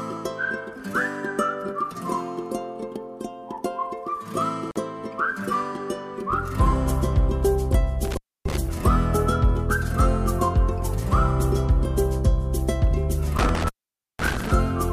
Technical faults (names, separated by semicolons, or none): intermittent contact